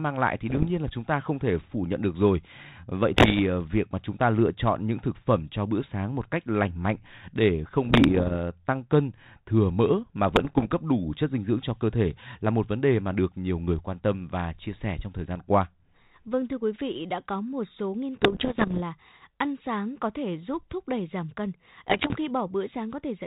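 Bit errors on an ADPCM link strike at 0.49–0.68 s, 3.14–3.40 s, 7.83–8.36 s (after "cách lành mạnh để", before "tăng cân thừa mỡ"), 10.28–10.73 s (after "cân thừa mỡ mà", before "đủ chất dinh dưỡng"), 18.18–18.81 s (after "có một số nghiên", before "ăn sáng có thể") and 21.88–22.16 s. Flipped bits derail the decoder's step size and predictor, causing pops, rough bursts and brief level jumps. On the waveform these appear as spikes. On the spectrogram they are broadband vertical smears, all below the 4 kHz ceiling of a band-limited G.726-style path.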